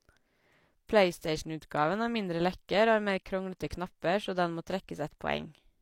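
A speech clip with one pre-echo fault at 3.70 s, between "har mer kronglete" and "knapper så den må". A brief smear of hiss, about 12 ms long, arrives just ahead of a sharp onset, softening its attack. The transform codec spread the quantisation noise across the whole block, and because the transient sat late in that block, noise scaled for the loud attack leaked into the quiet interval before it.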